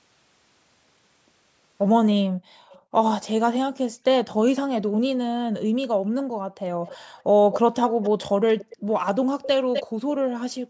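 Speech clip with two faults. Background gated by the echo canceller: the room sound drops by about 40 dB at 2.24–2.95, 4.89–7.18, 7.9–8.02, 8.76–8.9 and 9.84–10.28 s, as suppression clamps the microphone. Echo leak: a delayed copy of the speech is heard at 2.69–3.25 s, faint, 310 ms behind. It returns at 6.87–8.76 and 9.42–9.83 s, louder, 252 ms behind. The likely cause is loudspeaker echo left uncancelled.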